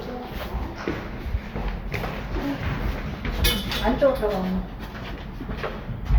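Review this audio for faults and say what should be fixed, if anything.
Nothing needs fixing, since the signal holds steady, with no audible technical faults anywhere in the sound.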